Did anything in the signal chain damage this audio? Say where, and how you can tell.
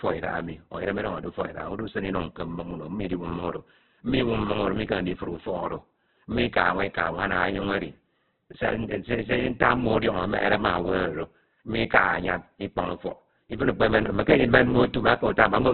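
Yes, at the codec stage, and it runs through the whole clip. The speech is narrowband, with nothing above 4.4 kHz. The voice sounds rough and grainy rather than swirly, with heavy damage everywhere. That points to Opus compression at a very low rate, likely about 8 kbps in its CELT music mode. Short of bits, the encoder fills bands with folded or noisy content and trims the top end away.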